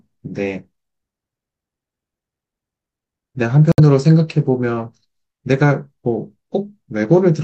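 At 3.72 s the speech cuts to dead silence for about 64 ms, then resumes by 3.80 s. The likely cause is a Bluetooth stall: radio interference delayed packets, the headphone buffer emptied, and playback paused until retransmissions arrived. Unlike an edit or codec packet-loss concealment, nothing is smeared, repeated or replaced with filler; the sound simply stops cleanly and restarts.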